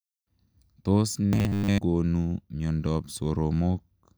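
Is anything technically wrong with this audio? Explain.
Yes. From 1.26 to 1.78 s the speech turns into robotic sound from repeated short buffers: a rigid, metallic buzz near 100 Hz that still loosely tracks the words. The likely cause is starved playback looping roughly 10 ms chunks for most of that stretch. Unlike steady hum, the buzz stops when normal audio resumes.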